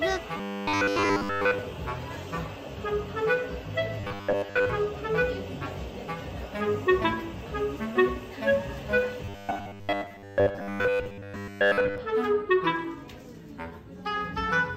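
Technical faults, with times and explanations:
0.37–1.58 s, 4.01–4.70 s, 9.25–11.98 s: robotic sound from repeated short buffers, a rigid metallic 100 Hz buzz, likely a 10 ms chunk looping over most of the missing audio.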